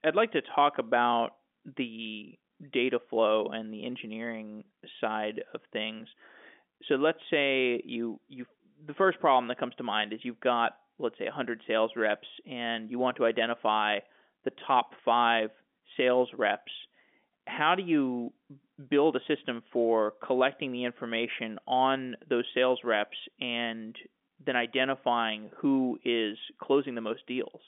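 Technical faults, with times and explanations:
Nothing here counts as a technical fault: the speech comes down an ordinary G.711 telephone line, so it sits in the usual narrow band of about 250 Hz to 3.5 kHz with nothing above 3.7 kHz, just as a normal phone call would.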